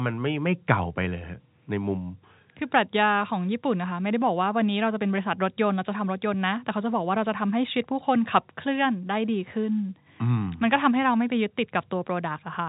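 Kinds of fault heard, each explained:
No faults heard.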